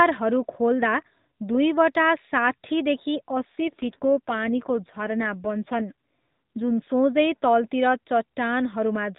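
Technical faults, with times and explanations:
3.56 to 6.83 s, AMR rate drop: The speech turns rougher and more synthetic, with a buzzy texture. The band stays the same, still cut off at 4 kHz as in the rest of the narrowband mobile audio. There is no gap. A weak radio link makes the network push the AMR codec to a lower rate. The sound fits a drop from 12.2 to 5.9 kbps. Fewer bits describe each 20 ms frame, so the voice model gets cruder until the rate recovers.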